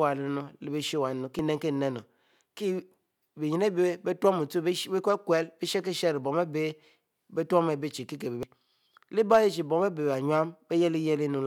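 A brief glitch cuts through the speech from 1.39 to 1.42 s, and the same kind of blip returns from 8.43 to 8.46 s, each lasting about 30 ms. Both are damaged data in a compressed stream: at those points the encoded bytes are corrupted, so the decoder misreads or rejects the affected frames, loses sync, and hunts for the next valid frame header.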